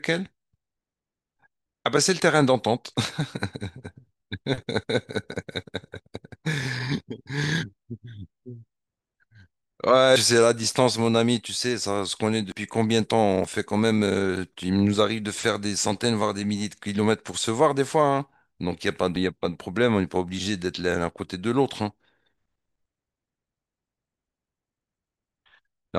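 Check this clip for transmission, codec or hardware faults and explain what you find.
Four skips break up the speech, at 10.16, 12.52, 13.44 and 19.16 s. Each is a jump with the sound skipping ahead, about a tenth of a second lost at 10.16 s and a few hundredths at the others. This is likely a dropped buffer (overrun): samples weren't collected before being overwritten, so the edges of the gap join directly. Unlike an underrun, no silent gap appears; the audio simply leaps forward.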